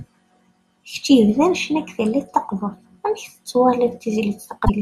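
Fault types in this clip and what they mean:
Damaged data in a compressed stream: A short stretch of the encoded speech data is corrupt. The decoder cannot read those frames properly. It loses its place and hunts for the next valid frame header. Here that happens near the very end, from 4.62 to 4.70 s. It lasts about 76 ms. It is heard as a brief glitch in the speech. The sound recovers once the decoder locks back on.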